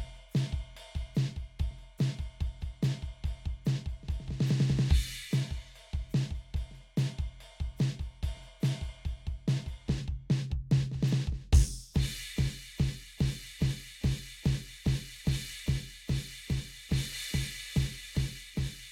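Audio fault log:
Nothing to log here: the music runs along without a single fault turning up anywhere in it.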